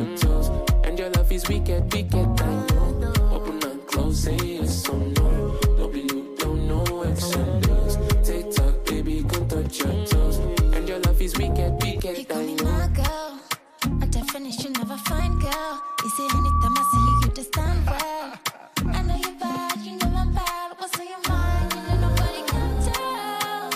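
Loudspeaker feedback squeal, 14.83 to 17.30 s: the microphone hears its own loudspeaker, loop gain exceeds one at 1.2 kHz, and that tone swells over about two seconds above the sound.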